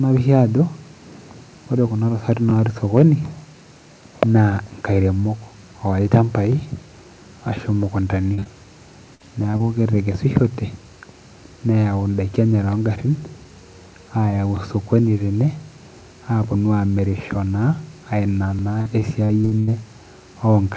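At 2.50 s the first overlapping-chunks join appears: the audio was handled in 4-second blocks, and each block starts 23 ms before the previous one ends, so that sliver plays twice. It sounds like a small click or stutter, and the same fault returns at 6.52, 10.54, 14.57 and 18.59 s, a steady four-second rhythm that marks it as a chunking problem.

Between these, two microphone overload events flatten the loudest peaks. The first, from 2.97 to 3.03 s, runs about 1 dB past full scale, with only a small share of samples cut, giving a harsh edge. The second, from 6.13 to 6.17 s, is harder, about 6 dB over, with roughly a tenth of samples squared off and a crackly, distorted edge. The likely cause is input gain set too high at the converter.

From 8.34 to 8.47 s, short concealed packet loss takes out three back-to-back stretches of 40, 20 and 20 ms. The decoder filled each hole by extending the preceding sound and then blending back in, so the passage smears and wobbles briefly. 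The same repair is heard at 9.15 to 9.21 s (40 ms), then at 9.51 and 9.57 s (20 ms each), as brief smears or wobbles.

The worst damage is repeated packet loss from 18.81 to 19.69 s. Six gaps totalling about 260 ms, the longest 81 ms, leave roughly 29% of that span synthesised rather than received. Each patch barely finishes before the next gap begins, so the sound turns choppy, with fragments missing. Throughout, the call path passes nothing above 8 kHz, which fits a wideband codec.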